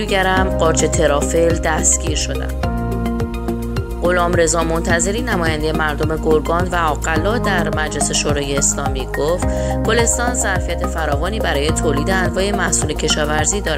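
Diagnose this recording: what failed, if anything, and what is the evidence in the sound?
From 0.10 s to 13.72 s there's a steady run of faint ticks, about ten a second: clock slip clicks. Likely two converters on free-running clocks, each slip dropping or repeating one sample. That rate suggests roughly 300 ppm of clock error.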